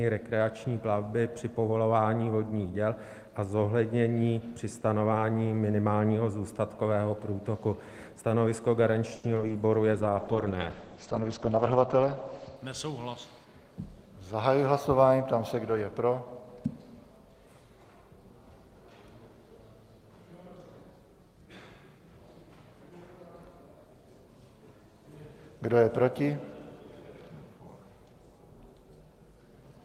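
The audio is a VoIP-style recording with three distinct transport faults in the middle. From 9.15 to 9.53 s there is repeated packet loss with a robotic sound: several short gaps arrive in quick succession, the longest around 80 ms. The receiver papers over most of them by extending the preceding sound, and roughly a third of that stretch is concealed this way. The result is a choppy texture with small pieces missing outright. Shortly after, from 9.94 to 12.62 s, a call bitrate drop sets in. The encoder is starved of bits, which sounds like a fall from around 32 kbps to about 10 kbps, and it holds at the bottom for roughly 2.6 s. The coarser coding makes the sound rough and watery. The audio bandwidth also narrows from 20 kHz to 8 kHz, so the top end goes dull and muffled until the rate recovers. Finally, from 13.10 to 13.53 s, a jitter buffer speed-up occurs. Too much audio had queued in the receiver, so it trimmed short pitch-period-sized pieces repeatedly, around 70 ms in total. 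Playback runs at 114% speed with the pitch unchanged, giving a brief hurried feel before normal pacing returns.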